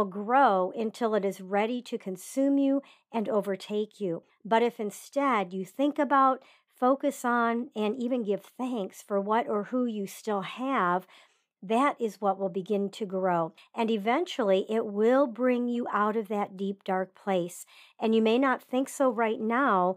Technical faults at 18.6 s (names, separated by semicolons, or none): none